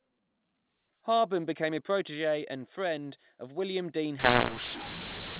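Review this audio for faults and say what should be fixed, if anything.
From 4.19 s to the end, the speech turns harsh and gritty, and the gaps between syllables fill with hiss: a mu-law and A-law mix-up. Bytes coded as A-law are being expanded with the mu-law curve, which misreads every level, swelling some and shrinking others while lifting near-silent samples well above silence. Unlike clipping, the damage reaches quiet passages too. Unlike the faint, level-following quantisation noise of the normal A-law telephone coding before 4.19 s, it is loud and jumbled. To prevent it, pass the G.711 law explicitly with the stream and decode with the matching expander.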